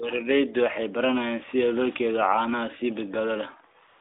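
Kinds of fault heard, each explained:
AMR comfort noise: The phone judged the talker silent and stopped sending speech frames. The receiver filled the gap with synthetic noise built from a rough level and spectrum estimate. From 3.88 s to the end, 135 ms, the real background becomes a smooth, steady hiss.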